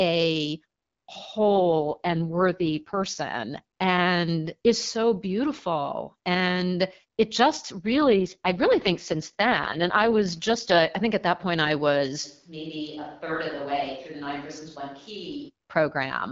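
AMR rate drops at 1.38 to 3.20 s, ending just before "and is so beautiful", and at 7.76 to 10.91 s, between "beautiful and it just" and "i think at that". The speech turns rough and synthetic with no gap or narrowing, which fits the AMR-WB codec falling from 12.65 to 6.6 kbit/s to protect a weak link.

Switch to a distant microphone at 12.26 to 15.48 s, starting after "at that point i". The speech suddenly turns roomy and hollow, about 10 dB quieter, with thinner bass and faint room noise, likely from losing the close microphone's signal.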